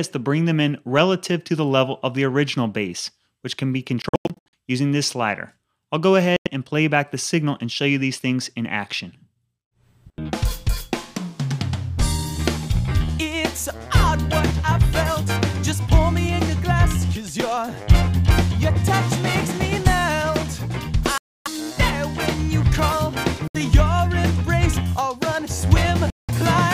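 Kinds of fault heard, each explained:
Bluetooth dropout: audio packets likely reached the headphones too late and were dropped, muting the output until good ones arrived. The sound vanishes five times, near 4.0, 6.4, 21.2, 23.5 and 26.1 s, losing 70 to 330 ms each time, then resumes as if it had played on.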